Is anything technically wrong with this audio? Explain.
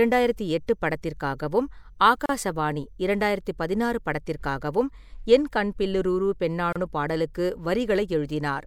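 Yes, the speech has two gaps at joins of encoded pieces, at 2.26–2.29 s (35 ms) and 6.73–6.76 s (31 ms). Separately encoded segments were spliced untrimmed, leaving encoder delay and padding as silences with smeared edges. Unlike dropouts, the speech resumes exactly where it stopped, with nothing lost.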